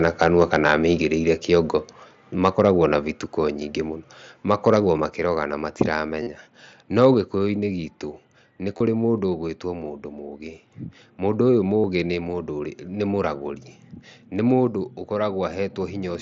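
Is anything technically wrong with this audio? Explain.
Yes, the speech has three recurring faults.

Microphone overload at 0.05–0.74, 2.45–2.68, 4.5–4.76 and 7.01–7.06 s: peaks run about 6, 3, 2 and 2 dB past full scale, likely from excessive input volume at the converter. The tops are flattened, giving a harsh crackle.

Microphone volume stepped down at 1.02, 3.06, 5.1, 7.14, 9.18 and 14.67 s: the level drops abruptly by about 3 dB each time, or about 2 dB at 7.14 and 9.18 s. This is likely call software lowering the input when it found the microphone too loud or clipping.

Concealed Bluetooth headset packet loss at 6.23–6.27, 8.78–8.80 and 11.80–11.84 s, spanning roughly 38, 23 and 60 ms. The mSBC receiver repeats recent waveform to fill each gap, producing a brief buzzy held tone and a slight warble as real audio resumes.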